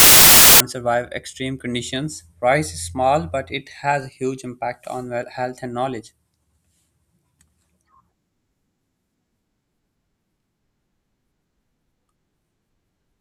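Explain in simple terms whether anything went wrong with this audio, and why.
The first 0.6 seconds is a harsh blast of static: file tags played as audio, where an embedded cover picture got read as sound before the speech starts.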